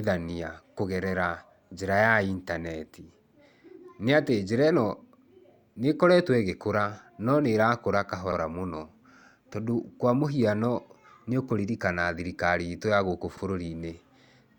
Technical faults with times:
3.27-3.33 overlapping chunks
8.32-8.38 overlapping chunks
13.38-13.43 overlapping chunks

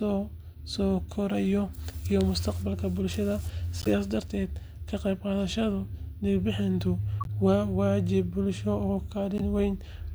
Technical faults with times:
3.80-3.87 corrupt frame decoded
7.21-7.29 corrupt frame decoded
9.38-9.44 corrupt frame decoded

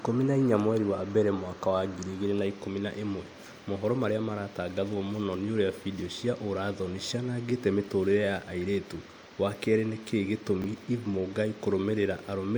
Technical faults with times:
7.84-7.88 chunks out of order
10.62-10.66 chunks out of order

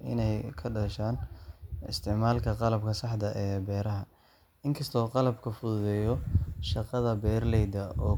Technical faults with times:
none

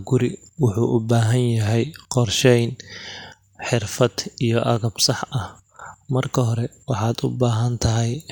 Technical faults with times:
none

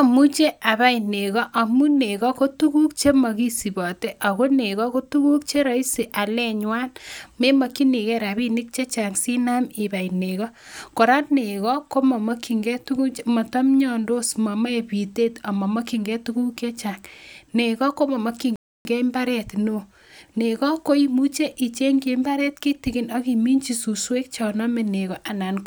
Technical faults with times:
18.56-18.85 playback stall

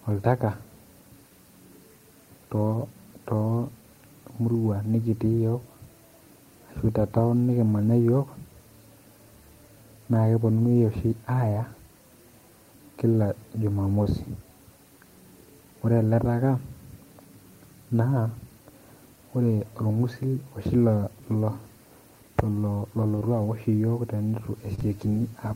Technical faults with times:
14.03-14.07 short concealed packet loss
23.15-23.23 short concealed packet loss
24.75-24.83 short concealed packet loss

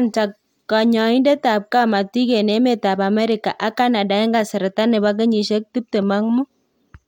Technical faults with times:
none

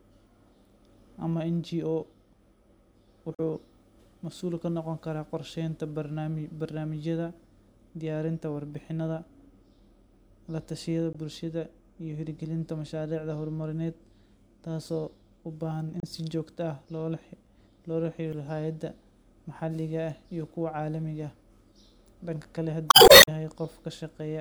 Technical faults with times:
3.33-3.40 damaged data in a compressed stream
11.13-11.15 damaged data in a compressed stream
16.00-16.04 damaged data in a compressed stream
18.32 damaged data in a compressed stream
22.87-23.20 damaged data in a compressed stream

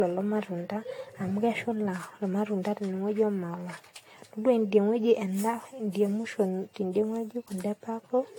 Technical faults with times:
0.00-8.38 generation loss

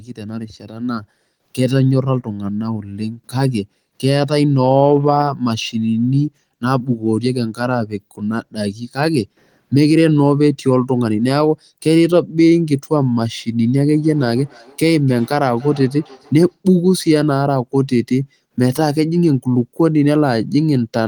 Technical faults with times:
13.76-16.59 feedback echo between two devices

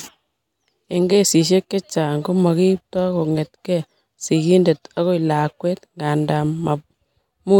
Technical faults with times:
none

